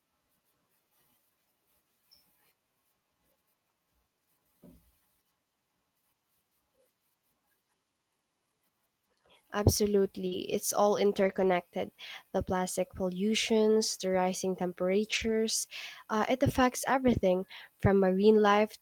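At 10.27 s there's a short concealed packet loss: about 40 ms of the call didn't arrive in time, so the decoder extended the preceding sound to fill the gap and then faded back into the real signal. The result is a quick smear right there. The tail of that spot, 10.31 to 10.33 s, is a lost packet rebuilt from error correction, where the decoder had a low-bitrate backup copy from the next packet to play instead.

The same in-band error correction turns up again at 11.19 to 11.45 s, at 15.11 to 15.33 s just after "plastic pollutions the rising", and at 17.13 to 17.19 s after "uh it affects". Nothing drops out at those points, but the rebuilt stretches sound rougher and noisier than the audio around them.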